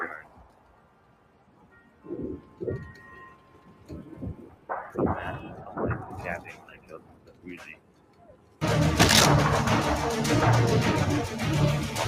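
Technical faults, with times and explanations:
Throughout: noise suppressor applied to music or sounds. A speech-tuned suppressor is treating sustained material as noise, swinging gain by roughly 20 dB. Onsets pass, but held sound and decays are pulled down, so the audio pumps and thins as the reduction engages and releases.
0.22–2.06 s, 2.38–2.61 s, 2.9–4.15 s, 4.39–4.69 s, 6.48–7.46 s, 7.75–8.61 s: sound cut by the noise suppressor. In each span the sound drops by as much as about 10 dB after it starts. The suppressor classes the steady portion as noise, so level sinks and tails are truncated.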